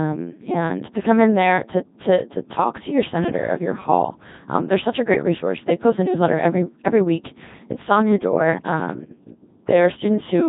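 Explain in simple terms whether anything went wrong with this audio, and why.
The speech has been through a Codec 2 vocoder, a very low-rate digital radio codec, and the damage is heavy from start to finish. Instead of keeping the actual waveform, this codec sends only a rough outline: pitch, loudness, whether the sound is voiced, and a coarse tone shape. The receiver then rebuilds the voice from sine waves, which makes it sound robotic and buzzy. Nothing above about 3.8 kHz survives, so the sound is also dull.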